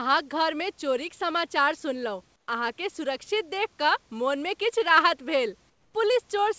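Comfort noise in place of the background at 2.36–2.48 s, after "चोरिक समाचार सुनलहुँ", and 5.70–5.94 s, after "मनमे किछु राहत भेल": the room noise gives way to a flat, featureless hiss, about 8 dB and about 6 dB quieter, likely from discontinuous transmission filling pauses with synthetic noise.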